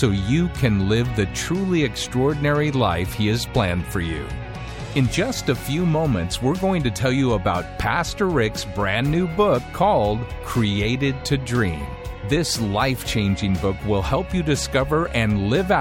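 No technical faults can be heard anywhere in the audio, and the signal stays continuous and steady throughout.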